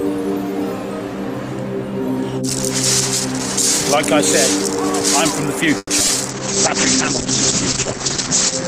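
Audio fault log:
5.77–6.10 s, repeated packet loss (robotic sound): four gaps in a third of a second, the longest about 120 ms, patched by stretching the previous sound so nearly half the span is synthetic. That gives a choppy stutter with small holes, unlike a bitrate drop's steady smearing.
6.31 s to the end, call bitrate drop: the encoder falls from 32 to 9 kbps and the audio bandwidth narrows from 20 kHz to 8 kHz, so the sound turns muffled and watery and stays that way. It is continuous, with no gaps, unlike packet loss.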